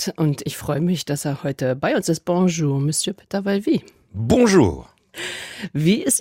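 No technical fault can be heard at any point in the audio; the signal stays continuous and steady throughout.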